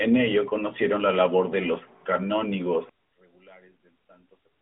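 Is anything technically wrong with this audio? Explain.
Yes. From 2.89 s to the end, the speech suddenly collapses by about 28 dB into a faint residue. This is likely one channel inverted: with one stereo side's polarity reversed, the shared centre content cancels when summed to mono, leaving only the small inter-channel difference.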